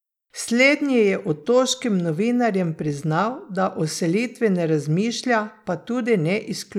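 No technical faults can be heard in this recording.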